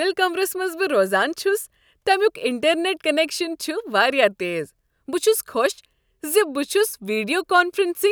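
No technical faults are audible anywhere in the speech recording.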